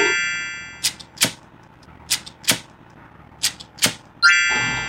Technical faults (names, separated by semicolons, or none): none